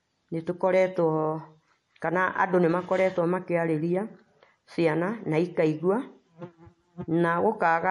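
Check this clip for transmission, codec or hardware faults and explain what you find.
One fault runs through the whole recording. MP3 compression, likely, from start to end: nothing sounds above 11.4 kHz, and weak detail flickers between frames, making the speech watery and swirly with smeared consonants, consistent with a low bitrate around 48 kbps.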